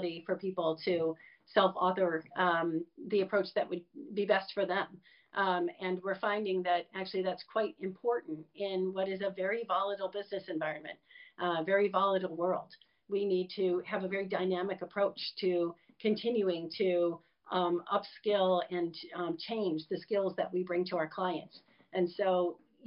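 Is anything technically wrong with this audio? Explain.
No, no technical faults heard.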